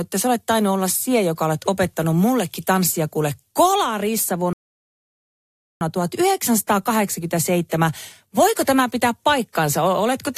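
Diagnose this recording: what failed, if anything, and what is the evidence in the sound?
A rebuffering stall at the playback stage interrupts the speech from 4.53 to 5.81 s. The sound cuts to silence and then resumes exactly where it stopped, so nothing is skipped, but the recording runs 1.28 s longer. On a spectrogram this shows as a clean vertical band empty at every frequency, and the waveform as a flat line. The player exhausted its downloaded audio and paused until more data arrived.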